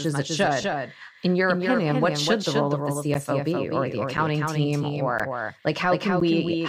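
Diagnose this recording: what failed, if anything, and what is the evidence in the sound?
Doubled audio track, at the editing or routing stage. Throughout the speech a second full-band copy trails the original by around 300 ms, roughly 5 dB quieter, with no decay or room colour. The likely cause is a second, slower capture path mixed in alongside the direct one.

Lost LE Audio frames, at the Bluetooth link and decoder. From 0.62 to 0.64 s the speech briefly turns into a noisy smear, the sound of the LC3 decoder reusing the last spectrum with randomised signs. The 20 ms gap fits two lost 10 ms frames.

Periodic USB or driver dropouts, at the driver or buffer stage. From 3.14 to 6.21 s, about four short gaps of silence, roughly 10 ms each, recur every 1.02 s and are heard as regular ticks over the speech. A background task is blocking the bus or driver on a fixed schedule.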